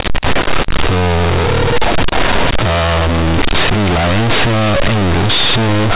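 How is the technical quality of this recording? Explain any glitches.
The recording is badly damaged from start to finish: the speech comes through very loud, harsh and buzzy, with heavy noise filling every pause. The cause is companded audio read as linear. The speech was coded as mu-law telephone audio, but those logarithmic bytes are played as plain 8-bit samples without expansion. Every sign change then swings the output across roughly half its range, so quiet passages become as loud as peaks and the waveform is badly misshapen. The underlying G.711 coding itself, at 8,000 samples a second, would limit the sound to below 4 kHz.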